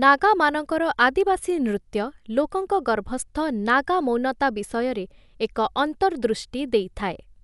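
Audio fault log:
throughout: Dolby Digital compression. The speech is dull with nothing above 11.4 kHz, and rough, fluttering noise surrounds voiced tones, likely from an encode fitting about 64 kbps whose starved bands the decoder fills with dither. A plain low-pass would leave no grit.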